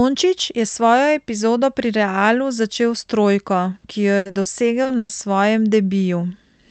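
Dropped samples at 0.755 s give a single sharp click. A tiny fraction of a millisecond of the waveform is missing, so the signal jumps straight to a later value. That is far too brief to remove any sound, and it is likely a buffer or sample-handling slip.

Repeated packet loss (robotic sound) runs from 4.17 to 4.47 s. The speech turns choppy because four holes, the longest 80 ms, together take up 180 ms, which is about 60% of that stretch. Each hole is filled by continuing the previous sound before the next dropout arrives.

Short concealed packet loss then hits twice in a row, at 4.83 to 4.87 s and 4.87 to 4.91 s, each 20 ms. The decoder bridges each gap by extending the preceding sound and blending back in, which is heard as a quick smear or wobble.

A burst of packet loss follows from 4.97 to 5.11 s. About 120 ms never arrived in time, so the receiver stretched the last sound and let it decay instead of leaving silence. 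A voiced sound becomes a held buzz and other sounds a fading hiss, then the speech resumes with that portion missing. All of this sits on an Opus call path whose top end stops near 8 kHz, at a rate of about 32 kbps.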